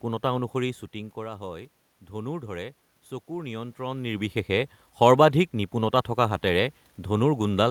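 Speech, with automatic gain rising from 0.93 to 4.4 s: after the voice drops by about 12 dB, the gain creeps up about 4 dB, lifting room noise with it, unlike the talker's own movements.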